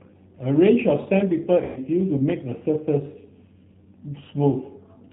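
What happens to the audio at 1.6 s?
From 1.64 to 1.79 s, VoIP packet loss concealed by the speech codec: about 120 ms of packets went missing, consistent with six 20 ms packets. The decoder extrapolates from its last pitch and filter and fades the gain, stretching the sound into a buzzy tone or coloured noise that decays and stays weak briefly afterward. All of this passes through the 8 kbit/s G.729 codec, which leaves the speech audibly rough, synthetic and missing everything above 4 kHz.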